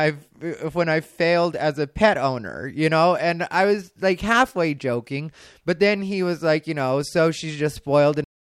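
At 8.24 s the speech stops mid-sound in a cut-off end: the final buffers were never written, so the audio drops straight to digital silence with no decay. The waveform shows a sheer vertical edge into a flat line, and the spectrogram goes abruptly blank.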